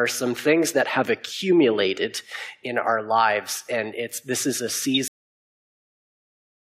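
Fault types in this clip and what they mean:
corrupt frame decoded: a single damaged frame played at 4.94 to 4.97 s, a brief squeaky blip, unlike a dropout because energy appears rather than vanishes.
cut-off end: at 5.08 s the sound stops mid-event into digital silence with no decay, unlike a fade-out, and stays silent to the end.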